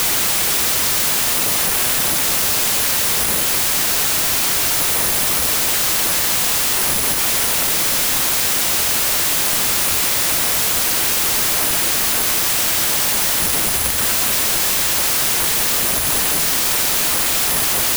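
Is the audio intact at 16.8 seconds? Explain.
No. At 16.8 seconds the speech is still affected by a wrong sample width fault that runs through the whole clip. Audio written as 32-bit integers is being read as packed 24-bit integers, so most samples are assembled from mismatched bytes and only some carry the true top bits. The result is loud broadband noise with the speech buried underneath, playing at 0.75 times speed with pitch lowered by the same ratio.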